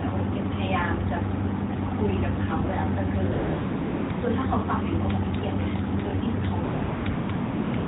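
AMR comfort noise: the phone stopped sending speech frames and the receiver synthesised a steady, smooth hiss in their place, at 3.32–4.10, 4.12–4.22, 6.64–6.82, 6.84–7.06, 7.10–7.30, 7.32, 7.36–7.74 and 7.76–7.88 s, switching audibly in and out.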